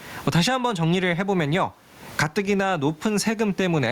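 Throughout the speech, the gain swings by roughly 25 dB, leaving the speech squashed and flat in level. This is gain pumping, likely from input gain set far too high with a fast limiter clamping down. The room noise sits about 42 dB below the speech.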